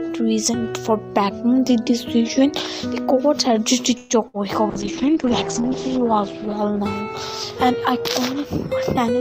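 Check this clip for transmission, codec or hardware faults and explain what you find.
Four transmission faults turn up, between about 4.0 and 8.5 s.

Call audio freeze, 3.97 to 4.13 s: the jitter buffer likely ran dry while packets were held up in transit. The receiver stretched the last sound into a fading fill for about 125 ms, and when the audio resumed nothing was lost, only delayed by 125 ms.

Burst of packet loss, 4.28 to 4.37 s: a run of packets never arrived in time. The receiver covered about 58 ms by extending and fading the preceding sound, then jumped ahead, so roughly 60 ms of the original audio is gone.

Call bitrate drop, 4.74 to 8.45 s: the bandwidth estimate collapsed and the encoder went from 96 kbps to 9 kbps, holding the lowest rate for about 1.1 s. Coarser coding and an audio bandwidth cut from 20 kHz to 8 kHz make the sound rough and dull.

Drift correction step, 7.43 to 8.11 s: clock-matching software likely slowed playback in one step, about 5.3% slower, to rebalance its buffer. 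Pitch drops with speed by about 94 cents, close to a semitone, then snaps back to normal.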